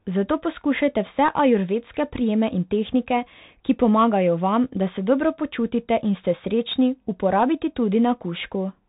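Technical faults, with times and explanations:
Throughout, Bluetooth CVSD headset codec: spectrogram stops dead at 4 kHz; one-bit adaptive steps lag loud highs, making scratchy s sounds over granular hiss.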